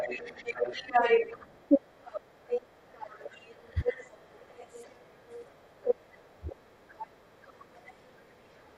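From the first second to the end, a second voice runs under the talker. This is the other side's voice leaking through. It sits at about the same level as the main speech, so it competes rather than hiding behind it. The likely cause is loudspeaker playback reaching the microphone, with the echo canceller leaving much of it in place.

Later, the talker's own voice starts dropping out in short dips. This is speech suppressed in double talk. The dips fall at 3.83 to 3.88 s, 6.36 to 6.63 s, 6.84 to 7.2 s, 7.39 to 7.88 s, 8.12 to 8.35 s and 8.58 to 8.67 s. The first two are shallow, about 10 dB. The middle ones deepen to about 15 and then about 20 dB. The last is slight, about 5 dB. The voice sounds pulled back. These dips likely come from the canceller mistaking overlapping talk for echo.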